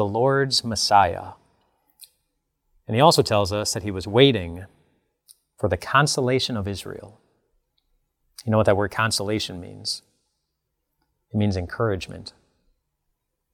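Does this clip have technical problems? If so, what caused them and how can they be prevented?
No, the speech signal in this clip shows no technical faults at any point.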